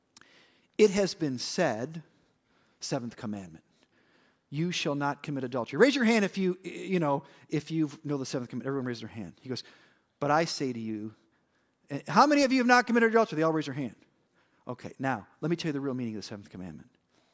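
No faults detected anywhere in the speech recording.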